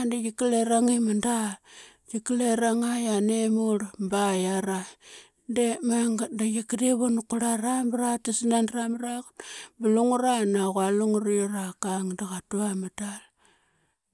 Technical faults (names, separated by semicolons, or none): none